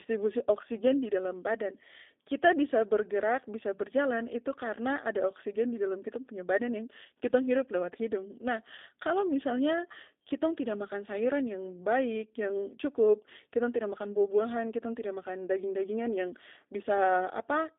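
From the first second to the last, the speech carries G.729 codec damage, and it's plainly audible. The band sits roughly between 250 Hz and 3.6 kHz, so everything sounds boxed in like an old phone line. The coder rebuilds each short frame from a vocal tract model plus a handful of pulses, so the speech comes out intelligible but rough and faintly synthetic, the buzzy texture you'd expect at a rate around 8 kbit/s.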